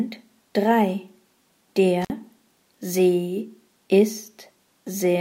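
At 2.02 s the sound breaks up with an intermittent contact, lasting until about 2.10 s. A loose plug or cable briefly loses its connection, so the signal drops out for roughly 53 ms, leaving faint hiss while the line is open. Unlike a digital dropout, which falls to clean silence with sharp edges, this gap is framed by scratchy crackle as the contact makes and breaks.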